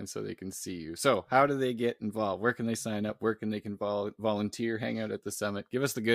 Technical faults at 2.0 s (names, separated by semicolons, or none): none